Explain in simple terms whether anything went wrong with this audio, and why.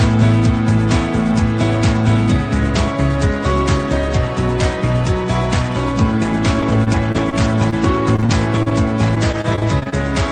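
Between 6.61 and 9.94 s the sound turns choppy and robotic from repeated packet loss. Eighteen short holes, none longer than about 31 ms, were each filled by stretching the preceding sound, adding up to roughly 0.4 s of patched-in audio.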